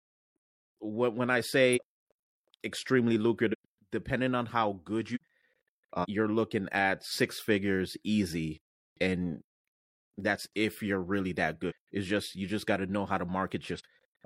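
Compressed frames skipped at 1.72, 3.49 (before "depending on how good"), 5.11 (after "depending on how good"), 5.99, 7.06 (between "looking at" and "figures easy and"), 11.66 and 13.75 s. Each time, lost or rejected frames make the sound leap ahead by roughly 0.2 to 0.7 s, in multiples that fit frames of about 46 ms. The join is a jump, not a silent gap as in a dropout.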